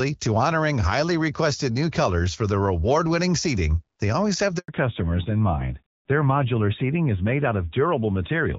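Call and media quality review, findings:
Handover gap, 4.58 to 4.68 s, just after "seating they always have": audio cuts out for 100 ms, then resumes. Probable component: radio link during a network handover. No speech frames arrived while the call switched networks, so that stretch is lost.

Fallback to narrowband, 4.68 s to end: audio turns duller and rougher, with nothing above 4 kHz. Probable component: codec renegotiation. The call dropped from HD Voice AMR-WB, which was clear before this point (consistent with 12.65 kbit/s), to AMR-NB at a rate that fits 7.4 kbit/s.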